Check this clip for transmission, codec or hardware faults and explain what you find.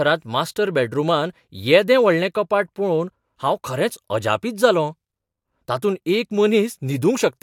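Nothing in this speech recording points to a problem in how it was sent, encoded or captured. There is nothing to report at any point in the clip.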